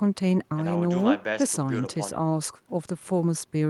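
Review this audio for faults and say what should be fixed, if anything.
Nothing in the recording needs fixing: the speech signal comes through intact, with steady level and no audible faults.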